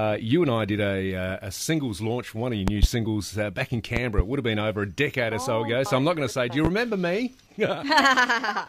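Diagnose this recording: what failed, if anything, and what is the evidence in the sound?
Loud pops in the analogue path: a double pop at 2.68–2.86 s peaks about 20 dB above the audio, another double at 3.97–4.22 s and a single at 6.65–6.68 s reach about 15 dB. The likely cause is voltage transients, from a switch, connector or static, added to the signal while the underlying sound continues.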